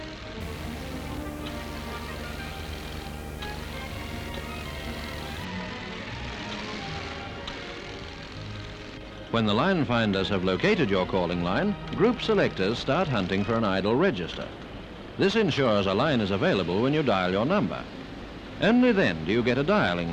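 A display or video cable coupling interference into the audio path causes video or display buzz from 0.41 s to 5.45 s. The screen's 75 Hz field rate leaks in as a steady, rasping buzz at that frequency, with a layer of gritty hash riding above it. The buzz is prominent, sitting only around 10 dB below the wanted signal, so it clearly colours the sound for those five seconds.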